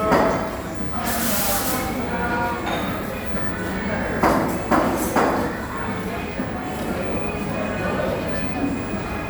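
A recording of everyday sounds, with nothing technically wrong to point to at any time.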